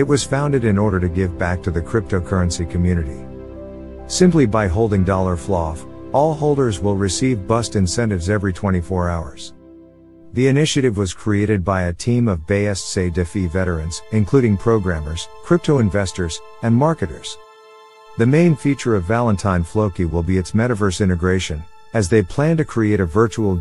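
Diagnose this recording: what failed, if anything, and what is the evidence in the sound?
Nothing stood out on listening that would point to a failure at any stage of the chain.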